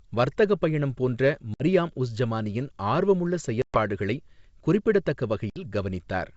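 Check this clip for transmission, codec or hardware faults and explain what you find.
Three dropouts from packet loss on an ADPCM call are audible, at 1.54 to 1.63 s, 3.62 to 3.79 s and 5.50 to 5.62 s, with about 60 ms, 120 ms and 60 ms of speech lost. Each gap is a hard-edged silence, longer in the middle event, where several packets went missing. Because the receiving ADPCM decoder's predictor and step size drift away from the sender's during the gap, the speech comes back with brief distortion, settling within some tens of milliseconds. The wideband G.722 coding itself, consistent with 64 kbit/s, shows no more than faint coding noise.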